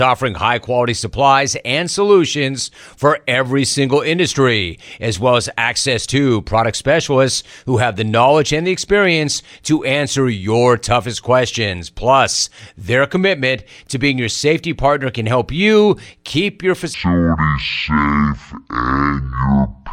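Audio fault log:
16.94–19.93 s, section at the wrong speed: after "help you keep your", the speech runs at half speed to the end, dropping about ten semitones and sounding deep and dragged. Speed and pitch change together, likely from playback against a mismatched clock.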